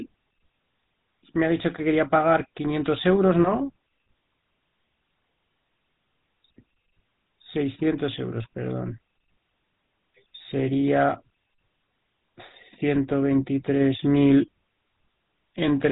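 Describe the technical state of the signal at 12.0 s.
At 12.0 s the speech carries GSM full-rate codec damage, which runs through the whole clip. The vocal tract is modelled and excited by sparse regular pulses, giving a plainly buzzy, gravelly roughness at roughly 13 kbps. A spectrogram shows a hard ceiling at 4 kHz.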